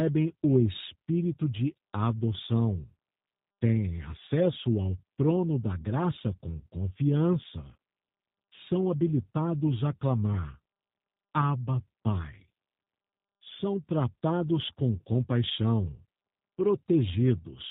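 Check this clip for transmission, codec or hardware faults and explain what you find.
There is one fault, and it runs through the whole clip: the speech has passed through a G.729 codec, and the damage is plainly audible. Nothing reaches above 4 kHz. Each 10 ms frame is rebuilt from a vocal tract filter, a pitch predictor and a few sparse pulses, so the voice stays intelligible but sounds rough, buzzy and slightly synthetic, which fits an 8 kbit/s G.729A stream. Plain band-limiting would only dull the sound. This has the extra grainy, artificial texture of model-based resynthesis.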